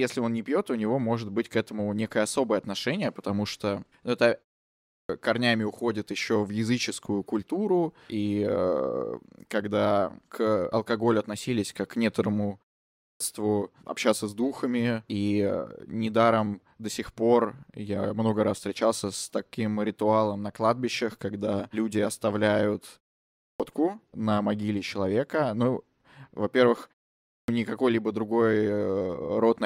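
Clipped start after a pause at 4.76, 12.88, 23.28 and 27.17 s. Each time the output wakes late and swallows about 0.32 s, so speech restarts abruptly.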